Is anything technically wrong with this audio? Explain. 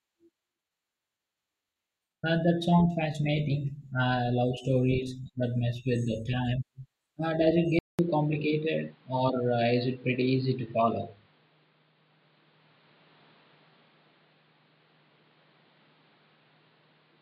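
Yes. At 7.79 s the speech drops out for about 200 ms, then returns through what is likely an input switched to a poorer device, narrower and boxier until the end. The new path passes nothing above 5 kHz, so sibilants lose their edge. On a spectrogram the upper band goes abruptly empty after a short blank column. The waveform shows a flat gap, then similar loudness with a fresh noise floor roughly 35 dB below the speech.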